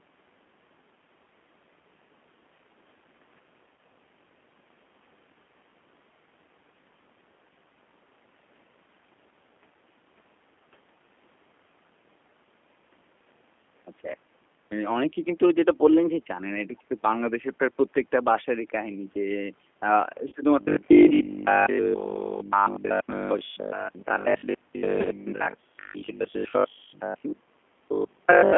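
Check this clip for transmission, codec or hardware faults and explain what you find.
Two faults are present in this speech: a low-rate speech codec colours the entire recording, and three short dropouts are patched over by that same codec.

G.729 codec, throughout: the speech is rebuilt from a vocal-tract filter, a pitch predictor and a few pulses per 10 ms frame rather than sent as a waveform. The sound fits an 8 kbit/s G.729A stream. Audio is confined to roughly 200 Hz to 3.4 kHz, and the codec damage is plainly audible as a rough, slightly synthetic texture on every phrase.

VoIP packet loss concealed by the speech codec, at 3.76 to 3.78 s, 20.28 to 20.33 s and 25.01 to 25.08 s: the first gap loses 20 ms, and the later two lose 40 ms each, consistent with one and then two missing packets. The decoder fills each hole by repeating its last pitch and filter at falling gain, so the sound smears into a brief buzzy tone or coloured noise that fades. 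Because each frame builds on the previous one, it stays weak for a moment after audio resumes.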